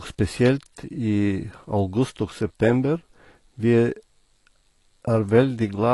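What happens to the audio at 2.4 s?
At 2.4 s you're hearing the same thing that runs through the whole clip: what sounds like AAC compression damage, and it's plainly audible. The speech is dull and smeared, with nothing above about 11.5 kHz, and sibilants and sustained sounds pick up a warbly, fizzy texture. That's likely a low-bitrate AAC-LC encoder quantising too coarsely, dropping the top band and leaving gaps in the spectrum, which fits something around 32 kbps.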